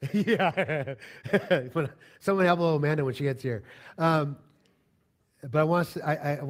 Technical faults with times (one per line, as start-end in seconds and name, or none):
1.02 microphone volume stepped up